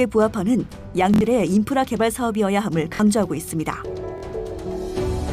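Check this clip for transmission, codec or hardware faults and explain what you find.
Three repeated-buffer faults occur. At 1.14 to 1.21 s, one 23 ms chunk plays three extra times; at 2.95 to 3.00 s and 4.18 to 4.23 s, twice extra. The chunk length fits a 1024-sample buffer. Fresh audio arrived late, so the device replayed its last buffer, and each event cost roughly 70, 50 and 50 ms. The result is a brief stutter with hard joins. Unlike a dropout, which leaves silence, the gap is filled with identical repeats.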